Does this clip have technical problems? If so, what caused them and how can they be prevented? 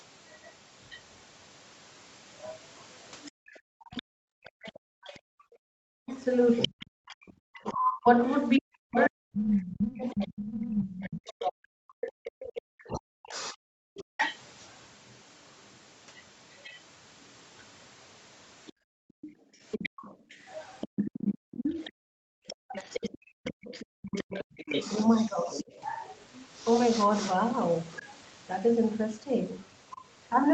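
Yes. The other side's voice leaking through can be heard from 0.29 to 11.33 s and again from 13.29 to 25.72 s. It sits roughly 10 dB below the speech. The likely cause is a loudspeaker feeding the microphone, with the echo canceller leaving some behind. A headset or a lower speaker volume prevents it.

Background gated by the echo canceller occurs between 3.31 and 5.59 s and between 18.73 and 22.73 s. The room sound drops out there, by about 39 dB and about 38 dB. In total this lasts about a second in the first stretch and about one and a half seconds in the second. The canceller clamps the microphone while the loudspeaker plays. Comfort noise or gentler suppression would keep the background steady.

Speech suppressed in double talk runs from 4.25 to 14.08 s. The talker's speech dips and breaks up for about seven seconds in total, with drops of around 40 dB. It happens again from 22.38 to 25.65 s, for under half a second. 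Both sides talk at once, and the canceller likely cuts the talker along with the echo. A headset or better double-talk handling prevents it.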